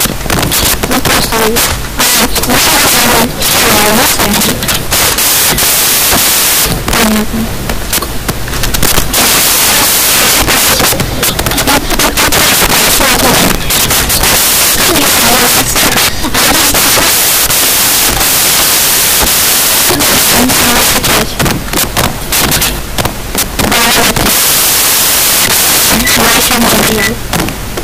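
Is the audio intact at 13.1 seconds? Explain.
No. At 13.1 seconds, and across the whole clip, the samples are built from the wrong bytes. Misassembled bytes promote noisy low bits, giving loud, harsh broadband noise.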